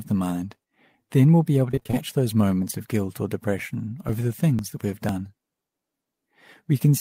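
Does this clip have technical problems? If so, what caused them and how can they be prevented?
Yes. Repeated packet loss (robotic sound) runs from 1.71 to 1.95 s: several short holes, the longest 23 ms, were each patched by stretching the previous sound, so nearly half that span is concealment and it turns choppy. A wired connection or a larger jitter buffer would prevent it.

Periodic USB or driver dropouts appear from 3.59 to 6.59 s, every 0.498 s: something briefly stalls the audio driver, and about 2 ms of audio is skipped each time, giving around seven evenly spaced ticks heard against the sound. Disabling the interfering background task or using a larger driver buffer would prevent it.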